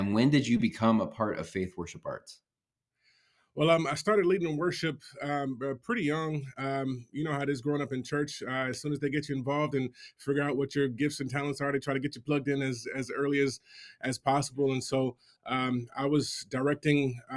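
No technical faults can be heard anywhere in the recording.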